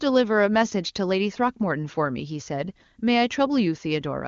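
No technical faults are audible.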